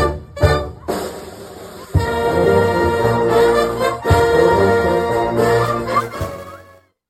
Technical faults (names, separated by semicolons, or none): none